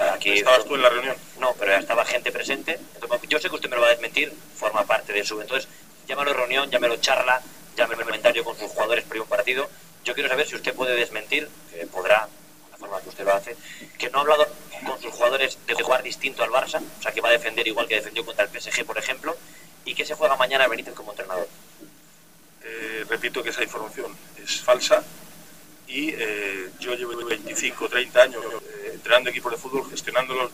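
Repeated buffers break the audio four times: at 7.94 to 8.11 s, 15.79 to 15.87 s, 27.14 to 27.31 s and 28.42 to 28.59 s. Each time an 85 ms slice plays again, twice at three of these points and once at 15.79 s, with a hard join at every repeat. That length fits a 4096-sample buffer replayed when fresh data arrived late. Unlike a dropout, the gap is filled by the same sound repeating, not by silence.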